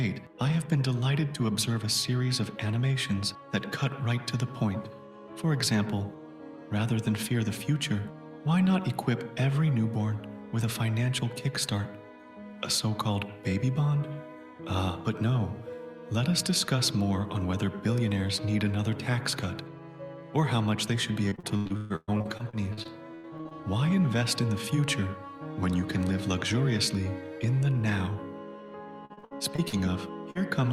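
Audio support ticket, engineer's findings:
Repeated packet loss (robotic sound), 21.29–23.57 s. Choppy texture with pieces missing. Points to some 18 separate losses, the longest 131 ms. About a third of the stretch is synthesised. Probable component: network path to the jitter buffer and decoder concealment.

Repeated packet loss, 29.05–29.75 s. Same robotic chop. Roughly 8 holes, longest 60 ms, about 40% of the stretch filled. Each gap is patched by extending the previous sound before the next gap arrives.

Short concealed packet loss, 30.31–30.37 s. Brief smear or wobble. About 40 ms never reached the decoder in time. The receiver extended the preceding sound and blended back into real audio. Probable component: network transport, masked by decoder concealment. A single isolated hole, not a run.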